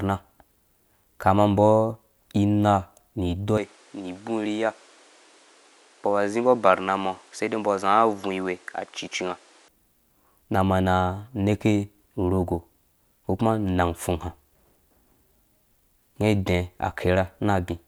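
At 3.58 s the speech abruptly loses its top end, with nothing above 11.4 kHz, drops a few decibels in level and picks up a new, faint background noise well under the voice. It stays that way until 9.68 s, then snaps back. This is likely an input switched to a poorer device. A simple filter would only dull the sound, whereas here bandwidth, level and noise floor all change together, with no gap at either switch.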